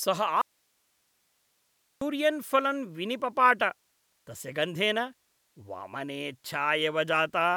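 An audio dropout to a faint residue runs from 0.42 to 2.01 s in this speech clip: the signal cuts out abruptly for about 1.6 s, leaving only hiss roughly 45 dB below normal level, then snaps back just before "फलम् विनिपपाट". The break is sudden rather than a pause or fade, and the hiss in the gap shows the path after the break stayed live, likely while the feed into it was briefly interrupted.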